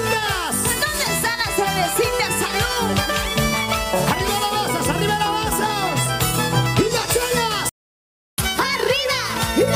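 The sound cuts out abruptly at 7.69 s and stays silent until 8.38 s, a gap of about 0.69 s. This is a playback stall, most likely the player running short of buffered data or its thread being blocked. What separates it from a signal dropout or a muted passage is that the silence is clean rather than noisy or faded. From 8.38 s to the end the audio runs fast, at 1.15 times normal speed, with the pitch raised by roughly two semitones. This is catch-up at higher speed: the player resamples its backlog to recover the time lost in the stall. The effect is not a deliberate pitch shift or a drifting clock, because it starts exactly where the stall ends, and tempo and pitch rise together by the same fixed ratio, like a tape played fast, instead of pitch changing alone or wandering gradually.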